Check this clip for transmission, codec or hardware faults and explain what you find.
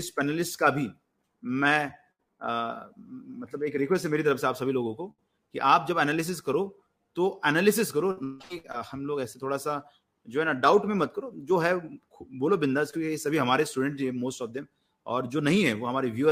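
Yes, there are transmission faults here: three bursts of packet loss and one short concealed packet loss.

The bursts of packet loss come at 2.11 to 2.21 s, 5.11 to 5.20 s and 8.11 to 8.19 s. In each one, a chunk of audio didn't arrive in time, so the receiver stretched the last sound it had and faded it out to cover the hole. That comes across as a held buzz or a fading hiss, depending on what was playing. Then the audio picks up again further along. The patches run about 73, 71 and 56 ms, and they cover roughly 80, 60 and 60 ms of lost audio.

The short concealed packet loss is at 12.91 to 12.95 s. It's the same idea on a much smaller scale. About 20 ms never reached the decoder, and the receiver covered it with roughly 19 ms carried on from the preceding sound before blending back into the real signal. What you hear is a quick smear or wobble at that spot.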